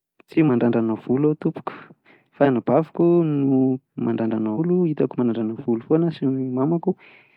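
Damaged data in a compressed stream causes brief glitches at 0.45–0.49 s, just before "volo aho tompoko", 2.41–2.47 s and 4.54–4.59 s, as the decoder loses frame sync.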